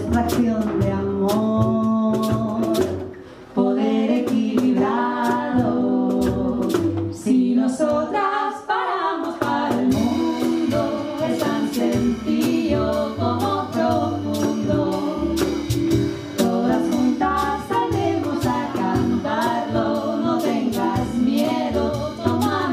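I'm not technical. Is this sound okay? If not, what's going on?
No. A bit error spike occurs twice: one or two stored digital values got corrupted, producing one sharp, isolated tick at 7.90 s and 12.39 s.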